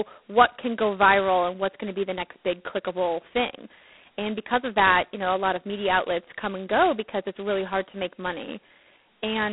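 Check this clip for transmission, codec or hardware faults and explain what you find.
The speech carries G.726 ADPCM damage from start to finish. The codec sends only a small coded difference between each sample and an adaptive prediction, and at its coarsest setting those few bits leave large quantisation errors. Here the speech has a harsh, rasping hiss that rises and falls with its level, which fits the 16 kbit/s mode. The band sits at roughly 200 Hz to 3.5 kHz, with nothing above 3.9 kHz.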